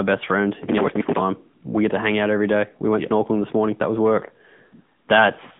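A speech clip carried throughout by the AMR narrowband mobile codec: audibly buzzy, synthetic voicing in a 150 Hz to 3.5 kHz line band, fitting a mid-rate mode near 10 kbps, with a spectrogram showing nothing above 3.7 kHz.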